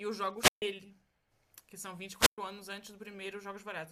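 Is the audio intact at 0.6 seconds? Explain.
No, a wireless microphone squelch dropout runs from 0.36 to 0.62 s: the fading radio signal swells into hiss before the receiver mutes for 141 ms, unlike a clean digital gap.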